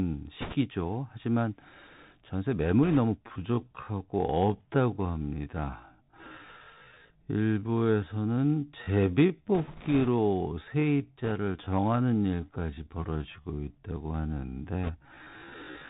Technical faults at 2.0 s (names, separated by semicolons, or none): Bluetooth CVSD headset codec